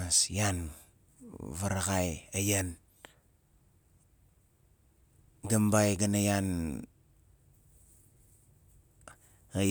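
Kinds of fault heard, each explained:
No technical faults detected.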